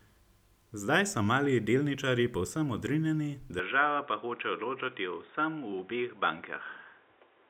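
Speech that turns dull and boxy from 3.59 s, right after "mali delničarji povsem odrinjeni", to the end, with no gap and no level jump. The input has likely switched to a poorer device. A spectrogram shows everything above 3.8 kHz cut off and a new noise floor about 30 dB down.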